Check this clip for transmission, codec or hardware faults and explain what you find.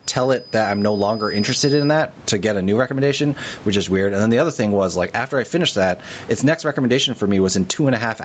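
Two faults stand out in this speech clip: gain pumping throughout, and a feedback whistle at the start.

Gain pumping runs the whole length. The gain swings by around 15 dB, likely from excessive mic gain driving a fast limiter. Unlike plain room noise, its level moves with the speech.

A feedback whistle sits from 0.0 to 2.0 s, ending just before "to get a new". It is a steady 5 kHz tone some 20 dB under the speech, swelling and fading slowly, likely from a loudspeaker-to-microphone loop held at the edge of feedback. It does not build into runaway howl, and being one pure pitch, it is not broadband hiss.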